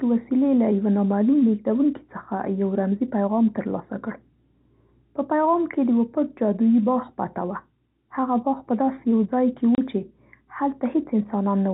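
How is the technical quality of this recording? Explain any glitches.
The recording is telephone-band speech, with nothing above 4 kHz as expected from G.711 coding, and it has one glitch: a brief dropout from packet loss filled with silence.

From 9.75 to 9.78 s, 30 ms of audio is missing, which fits a single lost packet. The receiver had nothing to play for that slot and inserted digital silence, so the speech cuts out abruptly, with hard edges at both ends of the gap.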